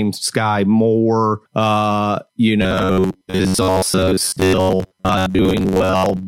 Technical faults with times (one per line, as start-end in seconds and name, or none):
2.62-6.27 robotic sound from repeated short buffers